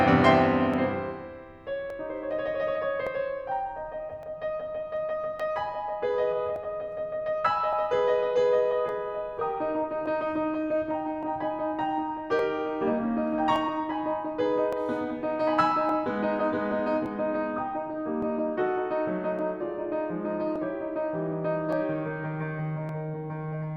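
From 0.74 s to 22.89 s the music carries a regular click every 1.17 s, about twenty in all. These are likely clock drift buffer slips: two mismatched clocks, off by around 500 ppm, forcing roughly 30 samples to be dropped or repeated each time.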